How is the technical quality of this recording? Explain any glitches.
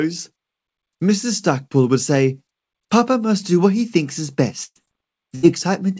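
Two short dropouts near the end, both a burst of packet loss. After "what he thinks is", 4.64 to 4.78 s, about 120 ms of speech vanishes. The receiver stretches the last sound into a fading smear, then about 40 ms of silence. Again at 5.35 to 5.46 s, roughly 80 ms goes missing, patched with a brief held sound. Content is skipped each time, not delayed. Nothing sits above 8 kHz, which fits a wideband call codec like G.722.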